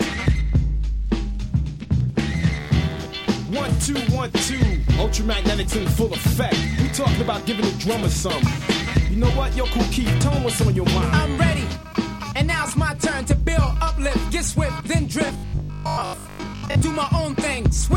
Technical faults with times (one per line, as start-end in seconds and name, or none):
15.27-16.83 robotic sound from repeated short buffers